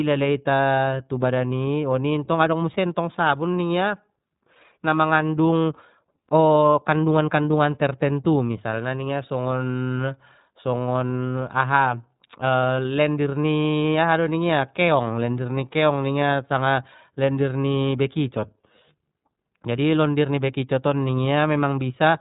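iLBC codec damage runs throughout this speech clip: with nothing passing above 3.8 kHz and each 30 ms frame coded independently, it sounds rough and synthetic, fitting roughly 13.3 kbps.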